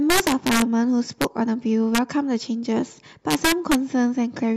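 Integer overflow hits this speech clip at 0.10 to 0.62 s, 1.22 to 1.24 s, 1.95 to 1.98 s and 3.31 to 3.75 s. Where the level was pushed past the integer ceiling, by about 6 dB, 3 dB and 1 dB, the samples wrapped to the opposite sign instead of being limited, so loud peaks turn into harsh cracks far sharper than clipping. Compressed frames skipped occurs at 1.45 to 1.48 s, where roughly 40 ms of audio drops out as frames go unplayed.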